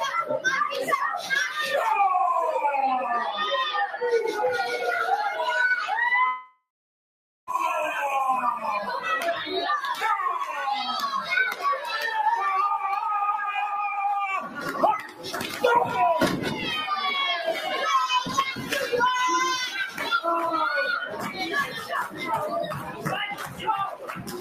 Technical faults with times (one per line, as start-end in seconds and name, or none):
0.00-24.41 noise suppressor applied to music or sounds
6.27-7.49 long network dropout
10.43-10.60 sound cut by the noise suppressor
11.21-11.96 sound cut by the noise suppressor
14.44-15.63 sound cut by the noise suppressor
19.88-20.03 sound cut by the noise suppressor
21.04-22.21 sound cut by the noise suppressor
22.69-24.41 sound cut by the noise suppressor